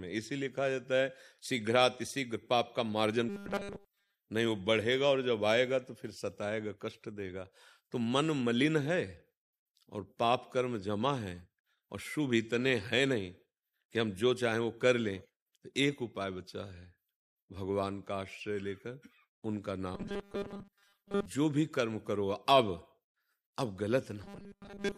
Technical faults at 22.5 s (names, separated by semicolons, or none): none